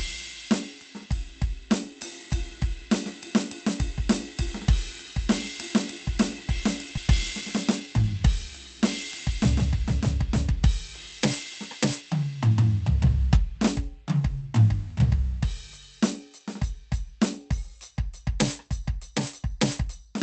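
A music clip, passed through an Opus call codec with its top end cut at about 8 kHz. A skip ahead at 6.97 to 6.99 s drops roughly 0.7 s of music with no fill. On a spectrogram the harmonic lines break abruptly and resume without any silent gap. Just after, from 7.07 to 8.15 s, a jitter buffer speed-up plays the music at 107% with unchanged pitch, trimming around 70 ms of pitch periods. This rushes the tempo, and the waveform shows whole cycles cut out at many points.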